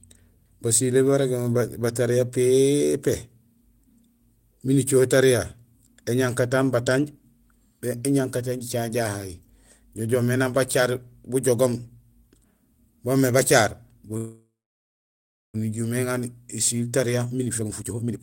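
From 14.17 to 15.56 s there is a call audio freeze: the last sound is stretched into a fading buzz, then about 1.06 s of silence, before the speech resumes where it stopped. The likely cause is delayed packets draining the jitter buffer, inserting a 1.37 s gap with nothing lost.

A jitter buffer speed-up follows from 17.18 to 18.19 s. The receiver trims short pitch-period pieces repeatedly to shed the backlog, about half a second in total, so the speech plays at roughly 145% speed at unchanged pitch and sounds noticeably hurried.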